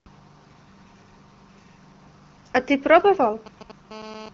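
GSM signalling bursts appear in this speech recording from 2.99 to 3.72 s: a galloping dit-dit-dit of short buzzes, sitting roughly 20 dB below the speech. A 2G handset close to the equipment is sending short groups of radio bursts, as it does while setting up a call or receiving a text, and the audio circuitry rectifies that RF into audible pulses repeating at about 217 Hz. GSM phone buzz follows from 3.91 to 4.29 s, now a continuous, hard, raspy 217 Hz tone rich in harmonics, at about 19 dB below the speech. The phone has moved into an active call and transmits a burst every 4.6 ms without pause, so the rectified pulse train becomes a steady buzz with no relation to the speech. Both interference sounds sit inside the AMR-WB band, which at 12.65 kbit/s carries nothing above about 6.9 kHz.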